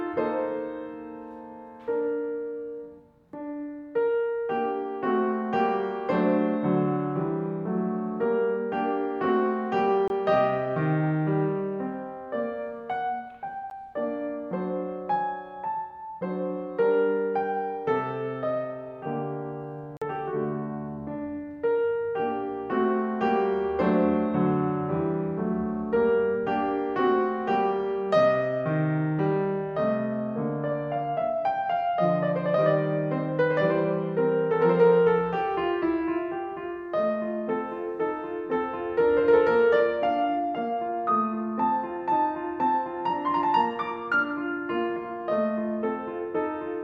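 Blocks of digital silence at 10.08–10.10 s, 13.70 s and 19.97–20.02 s: the music drops abruptly to silence for about 23, 12 and 46 ms, cutting out and back with no fade at each hard edge.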